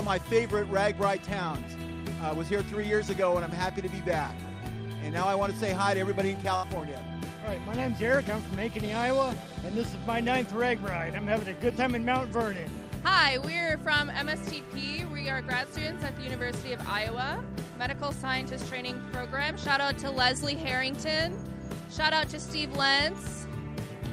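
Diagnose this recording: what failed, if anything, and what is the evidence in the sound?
A burst of packet loss at the network stage occurs from 6.55 to 6.65 s. For about 76 ms the receiver stretches the last sound it had and lets it decay, leaving a held, fading tail. When playback resumes, roughly 80 ms of the sound is missing. That extended, decaying fill is what separates it from a buffer underrun or storage skip, which would cut to silence or a click rather than smoothly concealing the gap.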